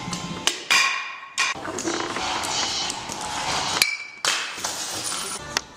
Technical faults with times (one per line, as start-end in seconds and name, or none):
none